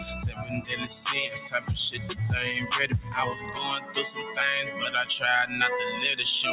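Across the whole clip a noise suppressor applied to music or sounds is at work. A speech-tuned suppressor is treating sustained, steady content as noise, so levels pump by around 10 dB as held material and decays are pulled down while transients pass. It is all heard through a narrowband path with nothing above 4 kHz, consistent with a G.711-style call codec.

Six brief passages are sound cut by the noise suppressor: 0.30–0.47 s (about 9 dB), 1.96–2.15 s (about 5 dB), 2.95–3.12 s (about 5 dB), 3.37–3.56 s (about 7 dB), 3.80–3.96 s (about 9 dB) and 4.19–4.38 s (about 8 dB). Each dips for up to a fifth of a second, heard as the sound briefly sinking in level.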